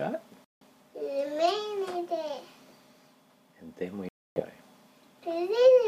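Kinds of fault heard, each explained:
Bluetooth dropout: the sound cuts to silence at 0.45 s for about 0.19 s and at 4.09 s for about 0.32 s, then resumes further on, as if it had kept playing. This is likely late wireless packets being discarded. Each gap shows as a flat line on the waveform and a blank vertical band across all frequencies on a spectrogram.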